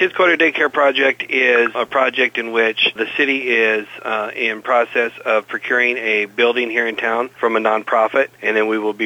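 No technical fault can be heard anywhere in the audio. There is no event that needs a time mark or a cause.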